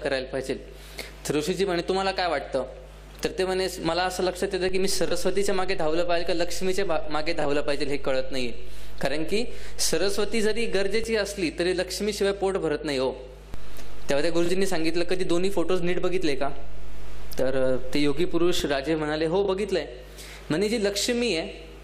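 A steady low buzz sits under the audio from start to finish: mains hum at 50 Hz, at roughly 15 dB below the wanted sound, from a ground loop or nearby transformer leaking the power line into the signal path. Low thumps mark two DC steps, where the waveform's zero line jumps by about -24 dBFS at 4.69 s and holds until 11.04 s, then by about -22 dBFS from 13.54 s to 18.60 s. These are the kind of offset jumps a recalibrating converter or a switched-in offset input produces, with a thump each time the offset arrives.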